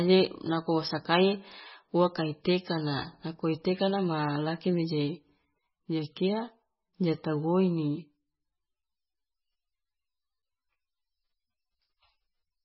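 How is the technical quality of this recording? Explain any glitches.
The technical quality is poor, with heavy codec damage across the whole speech clip. From start to finish the treble stops abruptly at 5.6 kHz, and the sound is watery and swirly, with metallic chirps on s sounds and smeared onsets. The likely cause is MP3 compression at a very low bitrate, around 14 kbps. Short of bits, the encoder chops everything above a fixed frequency and drops quiet spectral lines that flicker between frames.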